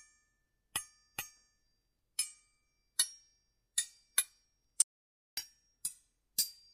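An audio dropout to silence runs from 4.82 to 5.37 s. The sound stops abruptly mid-flow and the gap of about 0.55 s is silent, with no room tone at all. The likely cause is a lost input, while the recording continued writing silence.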